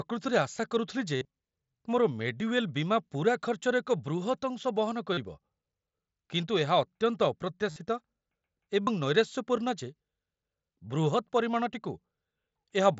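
Concealed Bluetooth headset packet loss hits the speech at 1.16–1.25 s, 5.13–5.18 s, 7.71–7.76 s and 8.83–8.87 s. The receiver loops recent waveform to fill each gap, heard as a brief buzzy tone, seen as repeating periodic cycles with flat horizontal harmonic bands.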